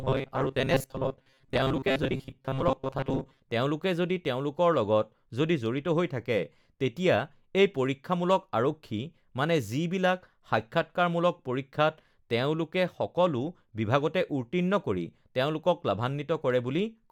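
From 0.01 to 3.42 s, new audio likely reached the playback path too seldom, so the software covered each gap by replaying the last short buffer while the incoming speech was skipped. Roughly half the sound is these repeats, and their steady cycle imposes a fixed pitch of 133 Hz, which fits buffers of about 7.5 ms. The result is robotic sound from repeated short buffers: a hard, metallic buzz that only loosely tracks the speech, clearing just before "তেওঁলোকে যদি".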